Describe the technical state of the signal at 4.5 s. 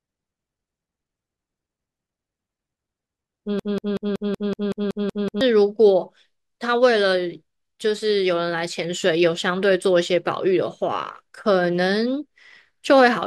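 At 4.5 s the speech is caught in a broken-record loop running from 3.59 to 5.41 s: a 0.19 s fragment repeats exactly, back to back, ten times. The likely cause is a stalled player or stream resending its last buffered piece, so the intended audio is lost.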